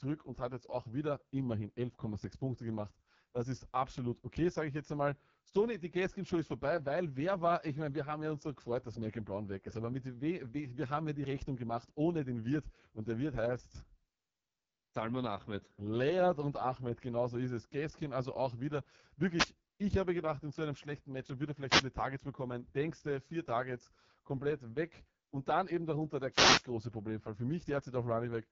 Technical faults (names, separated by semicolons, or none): AMR wideband (HD Voice) codec; wireless microphone noise hit